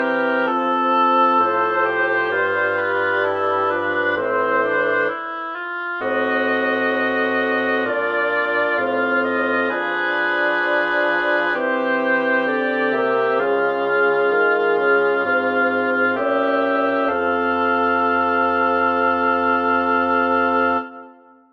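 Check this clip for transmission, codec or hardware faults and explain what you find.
No faults found in this clip.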